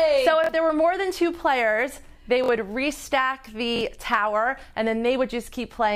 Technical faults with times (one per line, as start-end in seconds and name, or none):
0.44-0.49 repeated buffer
2.44-2.48 repeated buffer
3.76-3.81 repeated buffer